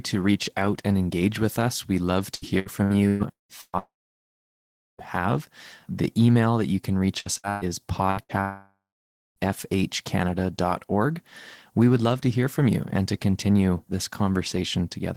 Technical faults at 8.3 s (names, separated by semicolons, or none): burst of packet loss